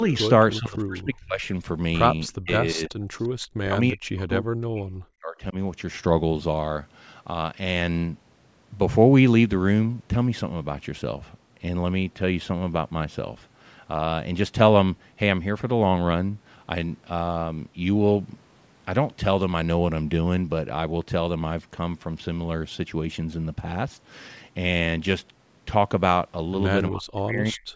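Speech, marred at the start and end by call echo-control problems. Brief, faint repeats of the sound trail it by 341 ms at 0.54 to 0.58 s, 2.28 to 2.32 s and 3.19 to 3.28 s, first about 20 dB below the speech and later about 35 dB down. This echo leak likely comes from a loudspeaker on the far end whose echo canceller let some of its microphone pickup slip back. Separately, the speech dips sharply, by up to about 40 dB, at 0.59 to 1.43 s, 2.35 to 3.16 s, 3.63 to 5.55 s and from 26.9 s to the end. This is speech suppressed in double talk: with both sides talking at once, the canceller most likely could not tell this talker from the returning echo and turned both down.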